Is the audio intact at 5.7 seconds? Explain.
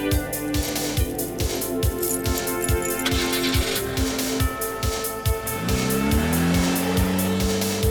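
No. Sample clock jitter runs through the whole clip, so it affects 5.7 seconds too. The converter's clock wanders by roughly a microsecond or two, so each sample is taken slightly early or late. Where the waveform changes fastest, that timing error becomes a noise about 30 dB below the signal. It is heard as a roughness or hiss that rises with loud, bright passages and drops away in quiet ones. A steady noise floor or tape hiss would stay the same regardless of the signal.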